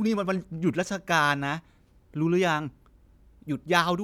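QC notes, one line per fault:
No faults found, so there is nothing to log in these QC notes.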